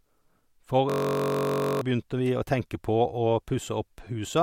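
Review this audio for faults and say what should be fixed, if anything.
From 0.90 to 1.81 s the speech turns into a steady, harsh buzz at about 46.9 Hz. This is a system hang loop: while the computer or driver stalled, the playback hardware kept replaying the same 21.33 ms slice of its ring buffer, which fits a 1024-sample buffer, some forty times over. About a second of real audio never arrives. Preventing it means finding the stall, using a watchdog that mutes output when the buffer stops being refilled.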